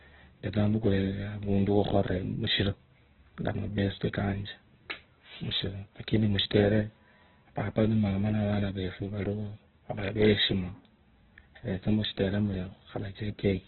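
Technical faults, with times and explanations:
Throughout, Opus compression, likely: the speech stops dead above about 4.1 kHz, so it sounds narrowband and boxed-in. It is also rough and grainy, with a noisy texture laid over every vowel. That fits an encoder starved of bits, around 8 kbps, filling bands with folded copies of lower ones or with noise rather than leaving them empty. Unlike MP3 damage there are fewer swirling, watery gaps in the spectrum, and more dense grit across the band that remains.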